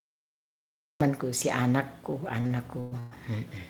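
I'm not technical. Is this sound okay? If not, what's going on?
No. For the first second there's only silence, then at 1.01 s the speech jumps in mid-sound with no natural beginning. This is a cut-off start: the recording or stream started late, so the opening of that sound was never captured.

Between 2.11 and 3.13 s the speech drags and stutters five times, with the longest hold about 0.12 s. These are repeated stalls (stutter): the audio data kept arriving late, so playback briefly stretched the last sound while waiting. Nothing is actually lost.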